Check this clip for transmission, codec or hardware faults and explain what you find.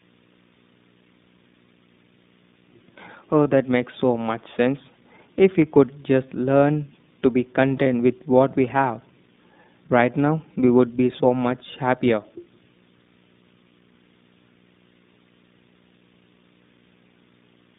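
Three problems here, two running the whole way through and one popping up twice.

Video or display buzz runs under everything: a 60 Hz buzz with hash on top, sitting roughly 30 dB below the speech, where a screen or video cable is leaking into the audio line.

The iLBC codec is also present throughout. Audio is squeezed into about 150 Hz to 3.7 kHz and the speech comes out rough and synthetic, which fits iLBC at its 20 ms, 15.2 kbps mode.

Lost iLBC frames hit at 3.44 to 3.46 s and 7.84 to 7.87 s. Each gap is about one 20 ms frame that the decoder papered over with a repeated pitch cycle, so you get a brief buzzy held vowel that snaps back clean right away.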